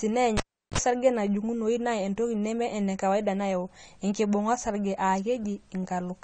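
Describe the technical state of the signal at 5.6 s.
At 5.6 s the speech carries AAC compression damage that runs through the whole clip, with nothing above about 9.1 kHz. The cause is likely AAC-LC coding at a low rate, around 32 kbps, where coarse quantisation smears detail and leaves sibilants fizzy and dull. A spectrogram shows a hard ceiling near 9.1 kHz.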